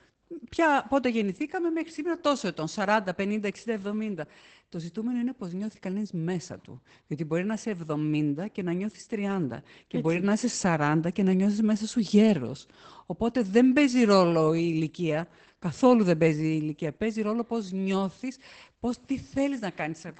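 From start to finish the speech carries Opus voice compression, and it's plainly audible. The band stops dead at about 8.8 kHz, so everything sounds a bit muffled and lacks air. The damage sounds like the SILK linear-prediction mode at wideband, with the excitation coded coarsely enough to fit a bitrate around 12 kbps. That coarse coding gives the speech a hoarse, faintly robotic edge that stays the same all the way through.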